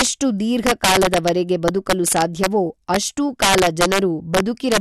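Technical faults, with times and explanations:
Throughout, integer overflow: the loudest speech peaks crack as the gain, pushed about 7 dB past the integer limit, wraps to the opposite sign on a small share of samples.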